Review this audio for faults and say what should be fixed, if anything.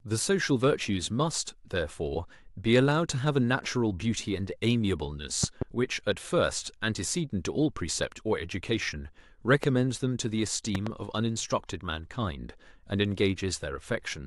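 Three loud pops punch through the speech, each rising roughly 15 dB above it while the speech carries on underneath. There is a double pop at 5.44 to 5.64 s, a single sharp one at 9.64 to 9.66 s, and another double at 10.75 to 10.89 s. The likely cause is a sudden voltage step or pulse from a loose plug, a switch, static discharge or a driver glitch, which the downstream circuits shape into a thump. Secure connectors, avoid switching during recording, and ground equipment against static.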